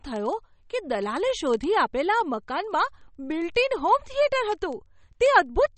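From the first moment the speech sounds watery and swirly, with the treble gone above 8.4 kHz and s sounds turning metallic and chirpy. This is most likely MP3 compression at a low bitrate, which fits something near 32 kbps. Short of bits, the encoder cuts everything above a fixed frequency and drops weak detail that flickers on and off between frames.

From 0.13 s to 5.77 s a train of sharp ticks of uneven strength runs at a steady rate of roughly one every 30 ms, about 150 in all. These are word clock ticks. The receiving device runs on its own clock, which is off from the sender's by several hundred parts per million. Each time the two clocks slip past each other, one sample is dropped or repeated.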